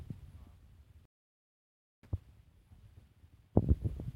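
A stream reconnect breaks this speech clip at 1.05 s. The sound drops out for about 0.98 s, until 2.08 s, as the connection fails and the player goes quiet while it reconnects. It then starts a new decoder partway through the stream, so the speech comes back at a later point rather than where it stopped, skipping ahead by about a second. Listeners hear a hard gap followed by a jump forward in the talk.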